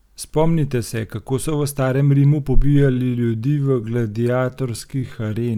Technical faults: time-stretched section

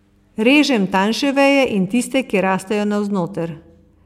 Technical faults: none

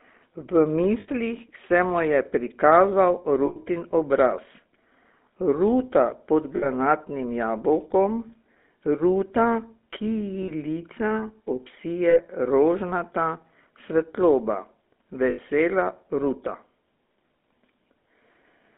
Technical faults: GSM full-rate codec; lost GSM frames

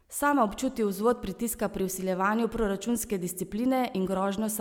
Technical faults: none

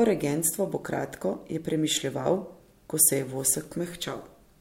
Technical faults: word clock ticks

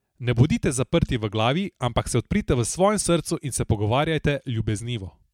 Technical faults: none

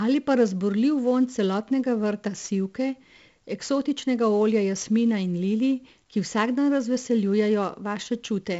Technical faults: 4-bit ADPCM compression

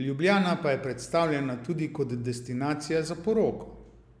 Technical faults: none

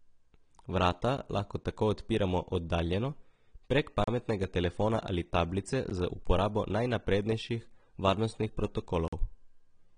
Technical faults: AAC compression; block of digital silence

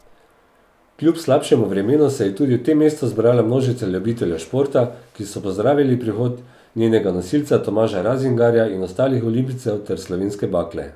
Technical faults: none

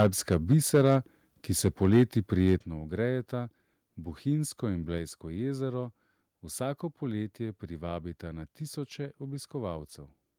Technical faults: microphone overload; microphone volume stepped down

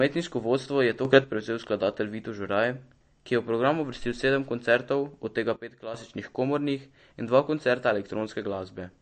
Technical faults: MP3 compression; sudden gain jump

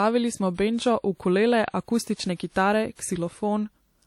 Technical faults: WMA compression

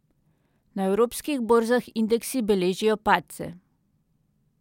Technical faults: none

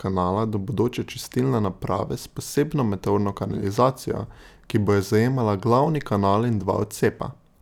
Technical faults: none

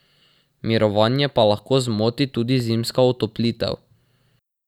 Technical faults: clock drift buffer slips

